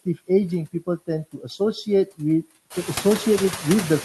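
This speech clip has a background that sinks heavily between phrases and pumps back up under the voice. These are noise suppressor artifacts throughout. The suppressor pulls down the bands it treats as steady noise by about 16 dB, frame by frame, so the floor keeps shifting. That effect gets more obvious after the room noise rises by about 13 dB at roughly 2.5 s and sits only about 11 dB below the speech. Between 1.33 and 1.6 s, part of the speech itself goes faint and swallowed, dropping by up to about 12 dB. Here the noise suppressor cut speech: it mistook soft speech energy for noise, and roughly 150 ms of that stretch was turned down along with the background. The top end stops near 12 kHz, which fits the band limit of an Opus call codec.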